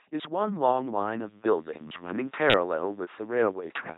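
The speech passes through an LPC-10 vocoder throughout, whose heavy damage fits a 2.4 kbit/s stream. Everything sounds buzzy and robotic, with nothing above 3.9 kHz.

From 1.32 s to the end, the input likely switched to a poorer device with no gap. A faint new noise floor appears, the level shifts by about 5 dB, and the band narrows.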